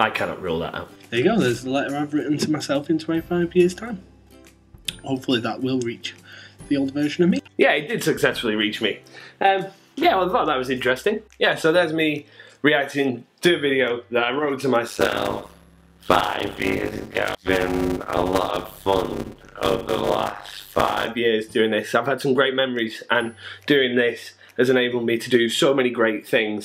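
From 14.88 s to 21.07 s the audio carries a steady 100 Hz buzz and plays back at about 0.53 times normal speed while keeping roughly its original pitch. This is a block size mismatch (padded): an upstream stage writes blocks shorter than the next stage reads, and the remainder of each block is filled with silence. The ratio points to 256-sample writes into blocks nearly twice that size. The repeated gaps produce the buzz and stretch the timing.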